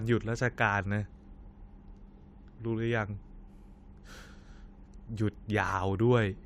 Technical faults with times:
2.17 corrupt frame decoded
5.68-5.72 corrupt frame decoded

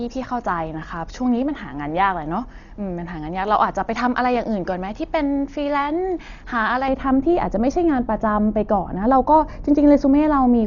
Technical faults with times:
0.00-10.66 Dolby Digital compression
6.88-10.66 de-emphasis applied wrongly

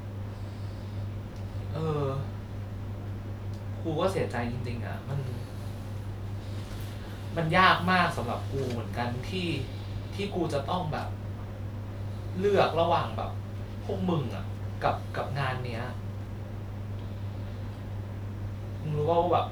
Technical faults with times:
none

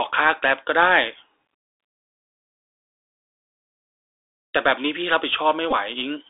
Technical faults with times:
0.00-6.29 Bluetooth CVSD headset codec
5.71-5.74 Bluetooth headset packet repeated

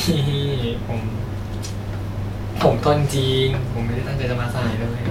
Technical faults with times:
none

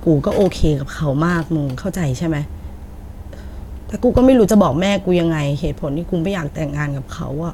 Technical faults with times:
none

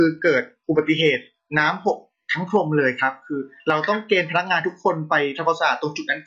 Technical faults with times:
0.00-2.00 adaptive stream starting at a low bitrate

